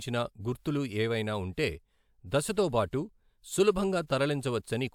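Nothing in this speech recording stood out as a technical fault on listening.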